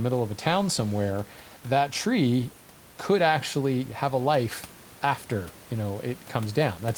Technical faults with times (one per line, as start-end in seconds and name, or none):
none